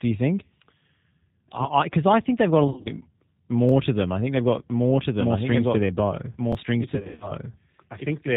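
Throughout the clip the speech carries the rough, slightly synthetic texture of the G.729 codec, which points to an 8 kbit/s stream. Nothing above 4 kHz survives, unlike plain band-limiting, which leaves the voice smooth.

From 2.68 to 2.90 s, VoIP packet loss concealed by the speech codec stretches the voice from its last frames into a fading sound. About 120 ms is missing over 180 ms, and the voice stays weak afterward rather than cutting cleanly.

At 3.69 and again at 6.53 s a repeated buffer plays a 23 ms piece twice, a hard-edged stutter that fits a 1024-sample buffer. It is an exact copy, not decaying extrapolation.

From 6.95 to 7.32 s a second packet-loss concealment covers 200 ms of losses over 260 ms, with runs up to 80 ms, again stretching and fading.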